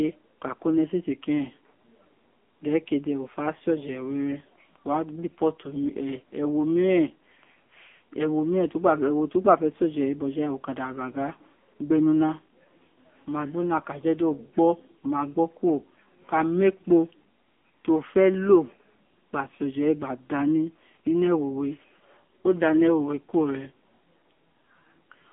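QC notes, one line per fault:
Throughout, AMR narrowband mobile codec: the speech has passed through a mobile voice link at a low AMR-NB rate, consistent with the 6.7 kbps mode, and heavily damaged. The codec rebuilds each 20 ms frame from a vocal-tract model fed by a sparse handful of pulses, so voicing turns buzzy and synthetic. The line band runs from about 200 Hz to 3.5 kHz, with nothing above 3.6 kHz, leaving the sound thin, boxy and dull.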